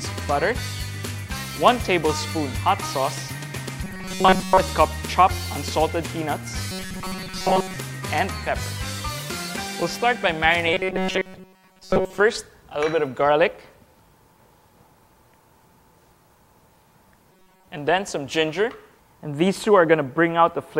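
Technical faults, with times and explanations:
3.83–4.60 s, 6.71–7.76 s, 10.73–12.20 s and 17.32–17.68 s, robotic sound from repeated short buffers: the sound turns into a rigid, metallic buzz pitched at 188 Hz, with most of each stretch made of repeats rather than fresh audio. The likely cause is a starved audio stream looping a chunk of about 5.3 ms, whose repetition rate sets that fixed pitch. Unlike a plain dropout or stutter, the sound keeps its rough shape beneath the steady mechanical drone.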